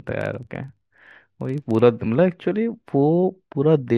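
From the start to 1.84 s the speech carries a steady ticking buzz at about 23.4 Hz that rises and falls with its level. This is a filter restarted on every block: it loses its state and begins each block from silence, which fits a 2048-sample block.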